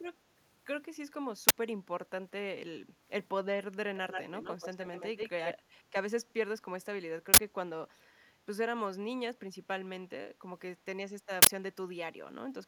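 At 1.49 to 1.58 s, 7.34 to 7.38 s and 11.42 to 11.47 s, an uninitialised buffer plays leftover memory as a loud digital noise burst. The lengths fit 4096- and 2048-sample blocks. From 3.96 to 5.54 s, an echo leak adds a copy of the voice 122 ms late, only slightly quieter. A loudspeaker echo canceller is the likely cause.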